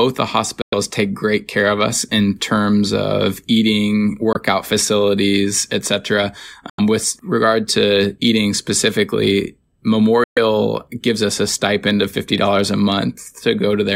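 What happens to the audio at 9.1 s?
At 9.1 s the speech continues intact, with no dropout, click, distortion or other fault at that point.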